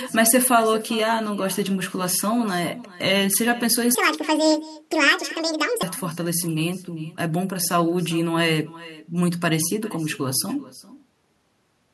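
With no echo canceller at the far end, the speech in this clip leaks from a loudspeaker back into a microphone and returns after the network round trip. A thinner copy trails every phrase by roughly 400 ms, sitting about 19 dB below the direct speech. Between 3.95 and 5.83 s there is a section at the wrong speed, likely from playback or editing against a mismatched clock. It runs 1.81 times too fast, so the speech turns hurried and jumps up by about ten semitones.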